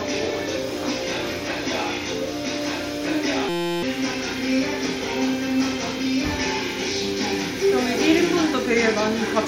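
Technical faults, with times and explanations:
3.49–3.83 s, system hang loop: a steady buzz at 172 Hz replaces the sound as one 5.8 ms fragment repeats 58 times, which fits a 256-sample buffer. The system froze while the hardware kept replaying its ring buffer, losing roughly a third of a second.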